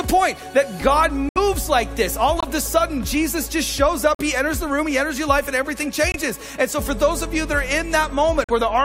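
Abrupt holes of silence cut in at 1.29–1.38, 2.40–2.45, 4.15–4.21, 6.11–6.16 and 8.44–8.51 s, each 44 to 88 ms long, with timing unbroken. These are corrupt frames muted: the decoder rejected damaged compressed frames and the player substituted silence for them.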